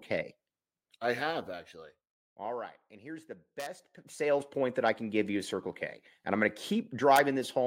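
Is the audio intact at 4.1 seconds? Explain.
No, 4.1 s sits inside a zipper noise run from 3.77 to 4.45 s, after "here's the": roughly 15 dB of gain moves in unsmoothed steps, ticking around 150 times a second.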